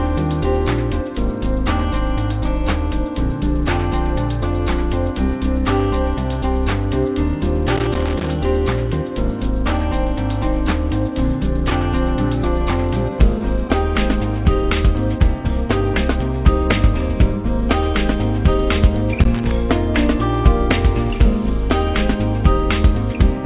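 At 7.76 to 8.30 s and again at 19.21 to 19.52 s there is loose connector crackle. A worn or dirty contact kept making and breaking, chopping the signal into an irregular burst of scratchy crackle. On the waveform these stretches show jagged dropouts. On the spectrogram they appear as scattered vertical broadband streaks, cut off at 4 kHz like everything else here, since the call path carries nothing above that, which fits G.711 telephone coding.

At 13.38 to 13.42 s a short concealed packet loss occurs. About 20 ms of audio never reached the decoder in time, and the receiver filled the gap by extending the preceding sound before blending back into the real signal. It is heard as a brief smear or wobble. On the spectrogram the band energy goes unnaturally flat and repetitive for that instant, and the waveform shows a slight seam where the real signal resumes.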